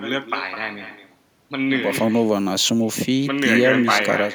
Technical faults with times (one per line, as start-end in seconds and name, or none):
0.00-4.34 echo with no canceller